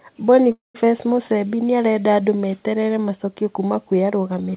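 Call audio freeze from 0.52 to 0.76 s in this speech clip: the sound stalls, the last fragment carries on briefly as a fading buzz or hiss, then about 160 ms of silence follows before the speech resumes where it left off. The likely cause is packets held up in transit, draining the jitter buffer. The receiver filled roughly 224 ms and lost nothing, so everything after it arrives 224 ms late. The narrowband call path, with nothing above 4 kHz, fits a G.711 A-law codec.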